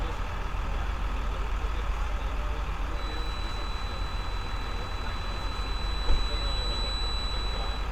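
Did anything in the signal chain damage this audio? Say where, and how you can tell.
Yes. A feedback whistle at 4 kHz sits about 10 dB under the sound from 2.89 s to the end, thin and wavering, likely an analogue speaker-to-mic loop hovering at gain threshold.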